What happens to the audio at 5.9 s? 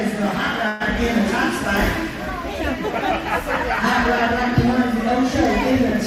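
Nothing goes wrong at 5.9 s; the audio plays through that moment intact.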